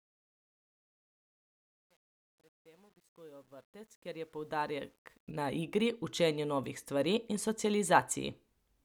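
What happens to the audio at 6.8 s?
Nothing goes wrong at 6.8 s: the speech continues cleanly, with no dropout, click or other fault at that moment.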